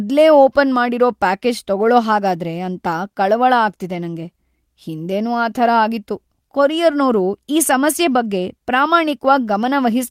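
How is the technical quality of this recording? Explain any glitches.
Nothing here calls for explaining, since I can't hear a single glitch anywhere in the recording.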